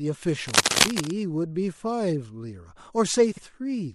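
Throughout the clip, likely MP3 compression at a low bitrate (the damage fits something near 64 kbps) starves the encoder of bits, so treble is cut off and weak frequency lines flicker between frames, giving the speech a plainly audible watery, swirly texture with smeared consonant attacks.

From 0.43 to 1.12 s, cable scratch noise, likely from a worn cable or connector being moved, makes the contact resistance jump about rapidly. Dense, uneven bursts of rustling and scratching sit over the speech, a little louder than it.

From 3.32 to 3.43 s, frames out of order: two adjacent blocks of about 52 ms each were swapped before decoding, so that short stretch plays with its halves exchanged. It comes across as a brief garbled flutter, and no time is lost.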